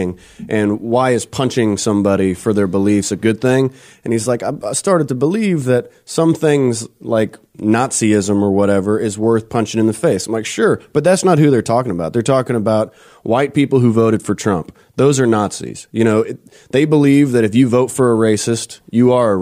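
No technical faults can be heard anywhere in the speech.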